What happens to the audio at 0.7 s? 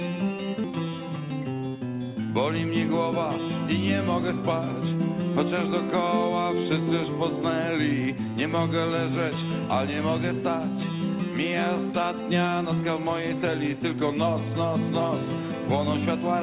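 A skip ahead occurs at 0.64 to 0.72 s. Roughly 0.7 s of audio was dropped on the way or by the jitter buffer. Playback jumps forward, joining both sides almost directly.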